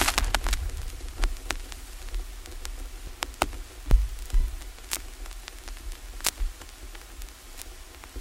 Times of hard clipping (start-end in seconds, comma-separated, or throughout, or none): 0.01-0.35, 3.23-3.42, 6.27-6.29